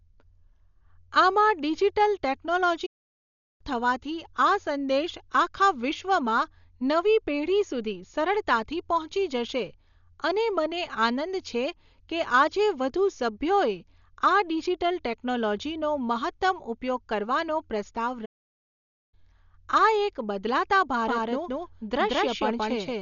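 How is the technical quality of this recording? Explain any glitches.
The technical quality is poor, with three kinds of fault.

Throughout, the sound is dull, with nothing above 7 kHz and rough, fluttering noise. This is likely heavy Dolby Digital compression, consistent with a low bitrate near 48 kbps.

At 2.86 s and 18.25 s, the speech stops dead for 0.74 s and 0.87 s. These are likely playback stalls, where the player ran short of data.

From 21.06 s to the end, a doubled audio track appears. An equally loud, dry copy trails by about a fifth of a second, likely from a second out-of-step capture.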